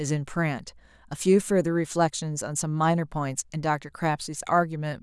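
No technical faults can be heard anywhere in this speech recording. The sound stays continuous and consistent throughout, with no moment that stands out as a problem.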